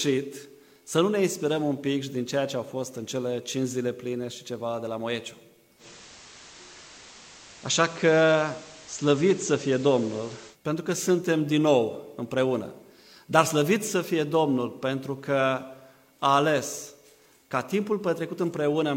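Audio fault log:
5.78 to 10.57 s: digital radio blending to analogue. The receiver cross-fades over 104 ms to the FM signal and back, adding hiss roughly 25 dB down and shifting level about 2 dB. The waveform envelope steps slightly.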